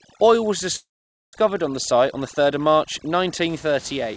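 Overdone noise removal runs from 0.00 to 3.49 s. The suppressor was set so hard that any frequency band sitting near its noise estimate gets pulled far down or shut off. The room noise, about 24 dB under the speech, drops and breaks up into twinkling specks, and quieter parts of the speech are stripped with it. Above 8 kHz the G.722 call path carries nothing.

A call audio freeze sits inside that stretch, from 0.76 to 1.35 s. The sound is held for 570 ms: a brief fading continuation of the last sound, then about 480 ms of silence, after which the speech resumes exactly where it stopped with nothing lost. The likely cause is a jitter buffer that ran dry while packets were delayed, so the gap pushes everything after it 570 ms later.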